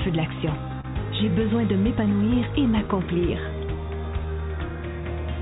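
Clock drift between sender and receiver runs through the whole clip. The sender's clock is slow by roughly one and a half percent, so the receiver's jitter buffer keeps draining and has to be topped up. The result is small, unevenly spaced timing hiccups rather than one clean error. On a waveform these show as slightly lengthened stretches. A spectrogram shows tiny smears where material is repeated, all inside a band that stops at 4 kHz, consistent with the narrowband G.711 call path.

At 0.81 to 0.86 s there is a short stall from a late packet. The buffer ran empty, and the receiver held the last sound for about 29 ms until the packet arrived, then resumed exactly where it left off. Nothing is lost, and the delay grows by those 29 ms. It sounds like a brief held sound with a faint buzz or dip. A spectrogram shows horizontal, frozen-looking bands at that spot, and the waveform shows a short periodic stretch.

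From 2.04 to 4.27 s the receiver makes repeated timing corrections, playing at about 98% speed and adding roughly 50 ms in total. This is the drift being absorbed by a string of small repeats, all stretching in the same direction but unevenly spaced. The waveform shows small duplicated segments, and the spectrogram shows short vertical seams where pieces were spliced in.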